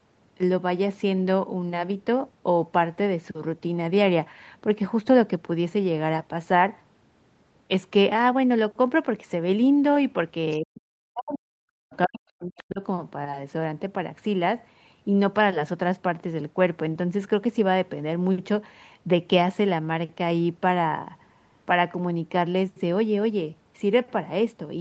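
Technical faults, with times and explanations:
10.59–12.81 s, speech suppressed in double talk: the talker's speech dips sharply and breaks up for around two seconds in total, at its deepest falling by roughly 40 dB. This is likely the echo canceller hearing both sides at once and turning everything down.
12.58–12.62 s, other side's voice leaking through: a brief scrap of a second voice surfaces, roughly 25 dB below the talker. The likely cause is loudspeaker playback reaching the microphone and slipping past the echo canceller during that double-talk stretch.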